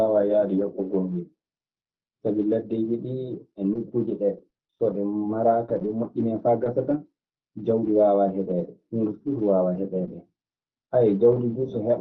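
Between 4.37 and 6.06 s, packets went missing or arrived too late, one at a time, and the receiver covered each hole by stretching the preceding sound forward. These scattered short gaps come to about seven, none longer than about 20 ms and together roughly a tenth of a second. They are heard as brief ticks, small smears and hiccups in the speech, which stays clear through the Opus call path's limit of about 6 kHz.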